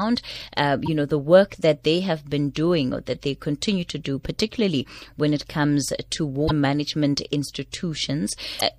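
Damaged data in the compressed stream of this speech clip makes the decoder misread frames and lose sync, producing brief chirps or blips at 0.86–0.88 s, 3.12–3.15 s, 6.44–6.51 s and 8.56–8.61 s, each lasting between about 25 and 70 ms.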